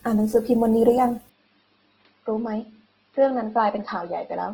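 A speech clip carries plainly audible coding damage from start to finish, the likely result of Opus compression in its music (CELT) mode. The band stays full, reaching about 20.1 kHz, but the encoder spreads too few bits across it, so voiced sounds come out grainy and noisy rather than hollow or swirling. That balance of wide bandwidth and rough texture fits a low rate of around 16 kbps. At 1.29 s the input switched to a poorer device, and that condition holds to the end. There is no gap at the changeover. From that point nothing is present above about 5.2 kHz, so the sound turns duller at once. The level drops by roughly 5 dB, and a new background noise appears well below the speech, around 45 dB down. Together these point to a different microphone or a headset's call profile taking over the recording path.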